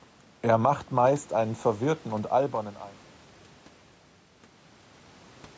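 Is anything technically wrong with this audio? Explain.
No, nothing here is technically wrong: the speech just eases out in a smooth, deliberate fade from around 2 s to 3.11 s, and the slightly trimmed bass and the lack of anything above 8 kHz are simply what a call's microphone processing does.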